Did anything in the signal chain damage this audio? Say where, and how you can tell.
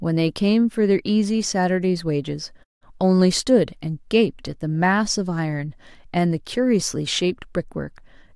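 No, nothing in the chain damaged this speech, and the background dropping to silence in the pauses is just the pause muting doing its job, with every syllable intact on either side.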